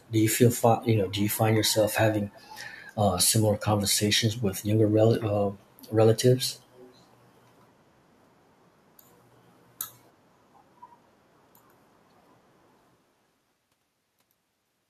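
Echo leak occurs at 0.00 to 0.08 s, 2.32 to 2.48 s and 6.51 to 6.98 s. A faint, delayed copy of the speech returns 288, 323 and 346 ms late, roughly 30 to 40 dB down. An incomplete loudspeaker echo cancellation likely let it through.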